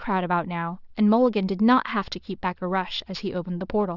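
Aliasing runs through the whole speech clip, from start to finish. The audio appears to have been resampled to a lower rate, which fits a drop from 24 kHz to 12 kHz, with no low-pass filter applied first. Energy above the new 6 kHz limit folds back below it and lands at unrelated frequencies roughly 25 dB under the speech. Sibilants come out gritty and metallic, and the spectrum stays dense right up to the 6 kHz edge.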